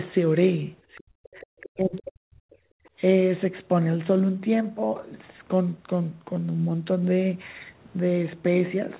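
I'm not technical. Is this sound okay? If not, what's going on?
No. Speech suppressed in double talk: when both people spoke at once, the call's echo canceller likely couldn't tell the talker from the loudspeaker echo and turned everything down. The talker's voice nearly vanishes from 0.91 to 1.18 s, from 1.4 to 1.51 s, and for about a second from 1.76 to 2.8 s.

Other side's voice leaking through: the echo canceller likely didn't fully remove the other person's voice, played on the talker's loudspeaker, from the microphone. It comes through faintly from 1.24 to 1.69 s, then as very faint scraps from 1.96 to 2.01 s and from 2.85 to 2.89 s.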